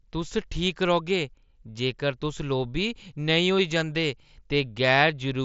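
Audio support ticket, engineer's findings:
Nothing to flag here; the speech is coming over a Bluetooth mSBC headset link, with content topping out around 7.7 kHz, just as that wideband codec allows.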